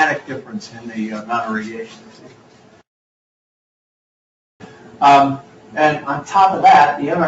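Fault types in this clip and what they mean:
Noise suppressor applied to music or sounds: A suppressor designed for speech stays active through the whole clip. It mistakes steady sound, ambience and reverb for noise and pulls them down. Its gain keeps shifting, with a swing of roughly 10 dB, so level rises and falls with the material rather than with the source. The top end stops around 8 kHz, which fits the normal band limit of the call path.
Sound cut by the noise suppressor: In four stretches the suppressor judged the sound to be noise and cut it harder than the rest. These run from 0.42 to 0.91 s, 1.85 to 2.82 s, 4.6 to 5.01 s and 5.42 to 5.75 s. The second stretch is the longest, about a second, and dips deepest, by about 9 dB. The other three dip by about 8 dB.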